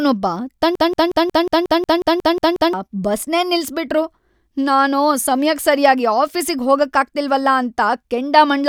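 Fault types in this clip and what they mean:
Broken-record loop: from 0.75 to 2.73 s the speech gets stuck on one 0.18 s snippet, replayed exactly 11 times back to back, so whatever should have been said there is gone. Likely the player or stream stalled and kept resending its last chunk.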